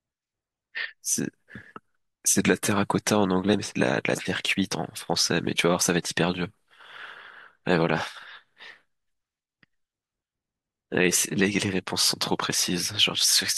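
At 2.27 s the speech jumps, the sound of a dropped buffer (overrun). A stretch of roughly 5 ms is missing, and the audio on either side is butted straight together. The likely cause is the recording software failing to read its input buffer before the hardware wrote over it. An underrun leaves a brief gap of silence; here nothing is inserted, so the waveform simply skips forward.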